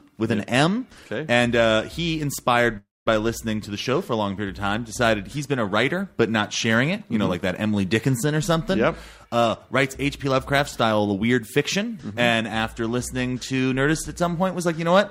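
Packets were likely held up in transit, leaving the receiver's jitter buffer empty: a call audio freeze runs from 2.77 to 3.22 s. The last sound is stretched into a fading buzz or hiss for roughly the first part of the stall, then drops to silence for about 200 ms before the audio resumes exactly where it stopped. Nothing is lost, but a gap of 288 ms is inserted and the stream now plays that much later. From 9.75 to 11.85 s the jitter buffer, holding more audio than its target, performs a jitter buffer speed-up. It repeatedly cuts out short pitch-period-sized slices, around 150 ms in total, so the audio runs at about 107% speed with its pitch unchanged. Over those two seconds it sounds hurried and rushed in timing.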